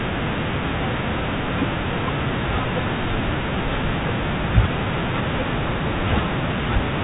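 No technical faults can be heard anywhere in the speech. The G.711 telephone coding is working as it should, with nothing above about 3.8 kHz getting through and its quantisation noise faint or absent beneath the signal.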